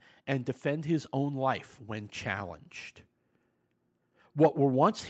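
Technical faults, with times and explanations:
0.13 to 2.56 s, automatic gain rising: the speech grows steadily louder, by about 4 dB over some 2.4 seconds. The background swells with it. The gain control judged the input too quiet and raised its gain gradually, lifting everything together.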